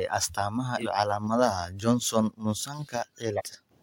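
At 0.77 to 0.84 s and 3.32 to 3.42 s, compressed frames are skipped: about a tenth of a second of speech vanishes each time, and the audio jumps ahead by that much.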